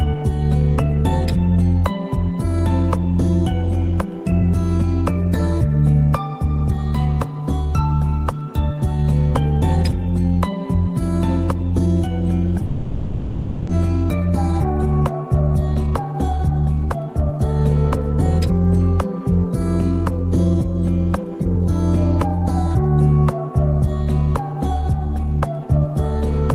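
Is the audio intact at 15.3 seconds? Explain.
No. A jitter buffer speed-up runs from 14.21 to 17.49 s. The receiver's buffer had built up more audio than its target, so it trimmed short stretches of one or a few pitch periods again and again to catch up, about half a second in total. Playback runs at 114% speed while the pitch stays put, so the sound through this span feels hurried and compressed in time.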